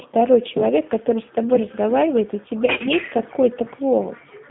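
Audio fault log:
Throughout: G.729 codec. The audio sounds thin, slightly rough and synthetic, with a plainly audible processed edge. Nothing passes below about 150 Hz or above about 3.5 kHz, so the sound has a narrow telephone band. The speech is rebuilt from a vocal tract filter, a pitch predictor and a few pulses per frame rather than carried as a waveform, which fits an 8 kbit/s G.729-family codec.
2.66 to 2.84 s: VoIP packet loss concealed by the speech codec. The speech turns smeared, briefly sustaining a buzzy tone or coloured noise that sags in level before recovering. About 100 ms of audio went missing in gaps spread across 140 ms, the longest run about 40 ms. The decoder filled each gap by repeating its last pitch and filter at falling gain. Because every frame builds on the previous one, the sound stays weak or distorted just after the gaps end.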